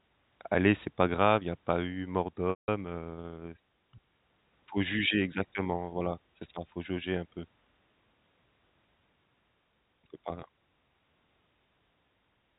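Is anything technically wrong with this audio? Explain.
Yes. At 2.50 s, just after "a pas eu mort", there is packet loss with pitch repetition lasting 180 ms, which fits a run of about nine 20 ms packets. The receiver fills the gap by looping the last pitch period, so the sound briefly holds as a buzzy tone, fades to silence within about 50 ms, and cross-fades back in at 2.68 s. A plain dropout would simply cut to silence, with no sustained buzz first. The G.711 telephone band limit, which passes nothing above 4 kHz, is audible throughout.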